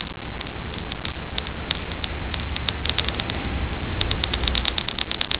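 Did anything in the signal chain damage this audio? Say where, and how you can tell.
Yes, most likely at the capture or editing stage: from 2.86 s to the end, a doubled audio track appears, with a second copy about as loud, arriving roughly a tenth of a second late and starting abruptly, dry and full-band, so every onset smears into a flat slapback.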